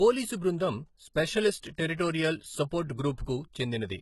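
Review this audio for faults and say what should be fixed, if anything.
The speech has nothing above 11.8 kHz for the whole clip. That ceiling points to an earlier very-low-bitrate encode, such as 16 kbit/s HE-AAC. This is likely low-bitrate audio saved at a high bitrate, later stored as 256 kbit/s MP3. The bigger file cannot restore what was lost. To prevent it, encode from the original source, never from a low-bitrate copy.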